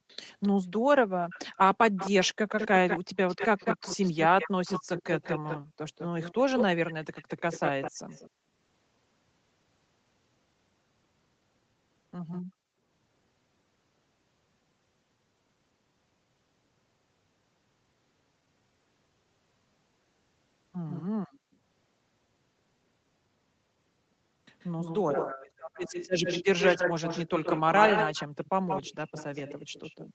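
A far-end echo canceller likely let loudspeaker pickup through. The resulting echo leak returns a delayed copy of the speech at 0.08–0.48, 1.3–1.58, 1.96–5.59, 5.98–8.3, 12.31–12.42, 20.89–21.04 and 24.6–30.14 s. The delay steps from 262 to 199 to 132 ms. The echo is faint in the brief bursts but nearly as loud as the speech from 1.96 to 5.59 s and from 24.6 s.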